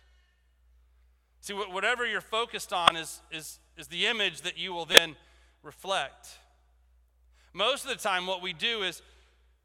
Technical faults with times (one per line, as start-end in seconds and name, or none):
2.86-2.90 corrupt frame decoded
4.92-4.98 corrupt frame decoded